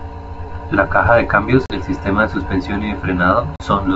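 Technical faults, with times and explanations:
1.66–1.71 s and 3.56–3.63 s, packet loss on an ADPCM call: a hard-edged 40 ms silence, after "caja de cambios" and after "de suspensión y de", then brief distortion. A couple of packets went missing, and the decoder's predictor and step size lost sync with the sender's until they readjusted.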